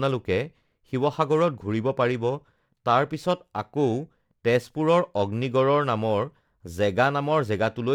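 A rough, metallic edge clings to this speech from start to finish and drops away in the pauses. That is periodic clock jitter: the converter's clock wobbles at around 2 kHz, spraying sidebands at that spacing around every component, most strongly on the higher frequencies.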